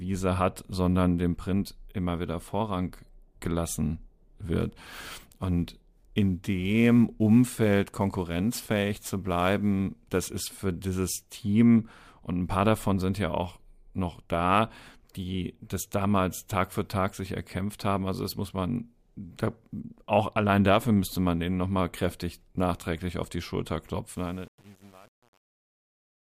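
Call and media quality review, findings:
Sample clock jitter, 4.60–10.27 s, ending just before "ist für dieses": random early/late sampling from an unstable converter clock, error of several microseconds, hiss roughly 30 dB below signal, worst on loud, bright speech.

Truncation distortion on a fade, 24.11–26.28 s, during the fade-out ending at 26.3 s: an undithered gain stage, consistent with 8-bit resolution, reduces the tail to coarse steps. Gritty from 24.22 s onward.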